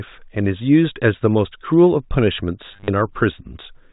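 From 2.72 to 2.88 s, packet loss with last packet repeated breaks up the sound: about 120 ms goes missing across those 160 ms, the longest run 40 ms, which fits 10 ms packets. Rather than silent gaps, each hole is refilled with the preceding fragment, so the runs stutter robotically.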